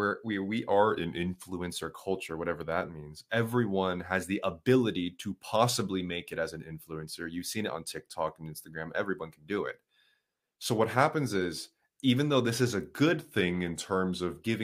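From 0.70 to 1.49 s, and again from 13.17 to 14.37 s, the speech slows by 5.6% and drops about a semitone. Then it snaps back. Each is likely a drift correction step, where clock-matching software briefly changed the playback rate to rebalance its buffer.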